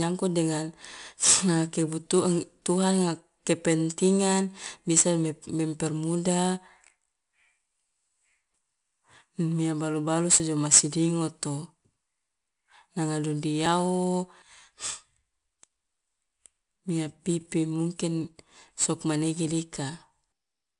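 From start to end, 4-bit ADPCM compression adds a plain gritty hiss that rides on every loud syllable. The data rate is near 89 kbps.

At 10.4 s, between "balu balusu" and "jo ma sidingoto", and again at 13.66 s and 16.26 s, the speech jumps ahead about 20 ms. A dropped buffer from an overrun is the likely cause.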